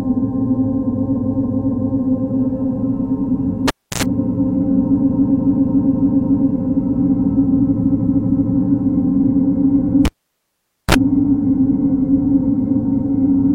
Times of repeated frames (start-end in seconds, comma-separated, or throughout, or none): 1.12-1.95, 5.07-6.46, 7.81-8.50